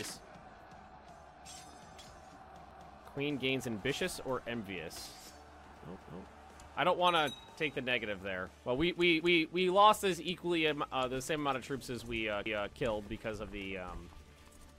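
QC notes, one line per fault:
2.71–2.96 s and 12.46–12.71 s: overlapping chunks. The sound is handled in 3.0 s blocks, and at these joins the next block begins 250 ms before the previous one ended, so that quarter-second plays twice, heard as a stutter or click at the seam.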